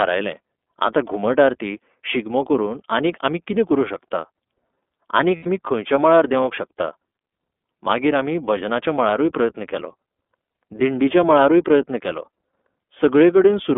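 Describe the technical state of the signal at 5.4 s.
At 5.4 s the signal is inside a burst of lost iLBC frames running from 5.37 to 5.47 s, a 90 ms gap that fits three consecutive 30 ms frames going missing. The decoder covers the hole by repeating the last pitch cycle blended with noise, so the sound becomes a held, faintly buzzy, breathy vowel. On a spectrogram this shows as flat, unchanging harmonic stripes smeared with noise. On the waveform it is a short run of near-identical periods. Because each frame decodes independently, the voice is right again almost at once after 5.47 s.

Underneath, the whole signal carries the iLBC codec's narrowband coding. It is confined to roughly 250 Hz to 3.5 kHz, and its 30 ms framing points to the 13.3 kbps mode. Each frame's excitation is coded on its own, which leaves a clearly audible rough, synthetic texture. A spectrogram shows a hard ceiling near 3.5 kHz with nothing above it, a thinned low end below 250 Hz, and grainy, slightly blurred harmonics in between.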